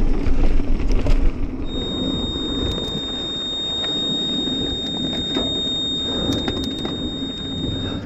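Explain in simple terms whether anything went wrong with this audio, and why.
From 1.61 s onward, a steady, high feedback whistle near 3.7 kHz sits just under the sound. It is likely a speaker-to-microphone loop, and unlike a howl it never builds up, only swelling and fading slowly.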